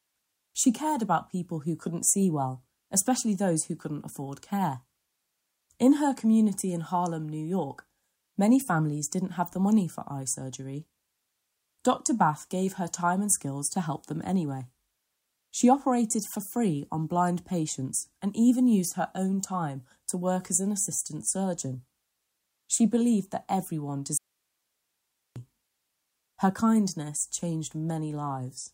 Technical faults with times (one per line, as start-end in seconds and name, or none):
24.17-25.36 audio dropout to a faint residue